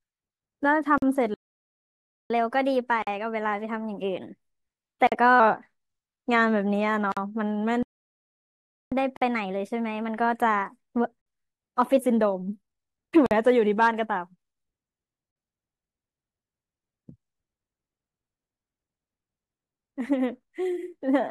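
First up, at 0.98 s, there's a gap at a join of encoded pieces. The speech drops into a 44 ms hole with smeared edges, then picks up exactly where it left off. Each separately encoded chunk kept its encoder's leading delay and end padding. The same gap, about 48 ms each, comes back every 2 s at 3.02, 5.07, 7.12, 9.17, 11.22, 13.26 and 15.31 s.

At 1.34 s the speech cuts out mid-flow for about 0.96 s in a playback stall, most likely the player running dry of data. It stalls again from 7.83 to 8.92 s, about 1.09 s of silence.

Right after each stall there's catch-up at higher speed, from 2.30 to 5.40 s and from 8.92 to 12.01 s. The player resamples its backlog at 1.1x, so the speech rushes and rises roughly a semitone and a half.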